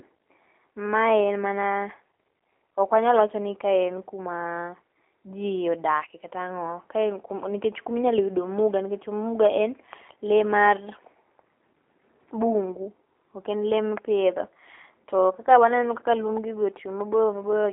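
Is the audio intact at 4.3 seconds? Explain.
No. At 4.3 seconds, as across the whole clip, the speech carries plainly audible G.729 codec damage. The coder does not store the waveform: it rebuilds each 10 ms frame from a vocal tract filter, a pitch predictor and a few pulses, and the thin, rough, slightly synthetic result fits an 8 kbit/s rate. The band is also confined to a telephone line of roughly 300 Hz to 3.4 kHz, so the sound is narrow and dull.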